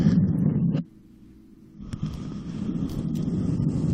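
At 3.27 s, a short run of compressed frames is skipped. Around three frames, each lasting about 21.3 ms, never reach the output because they were either missing or rejected by the decoder as damaged. The playback jumps forward by roughly 70 ms, so a small piece of the sound is missing.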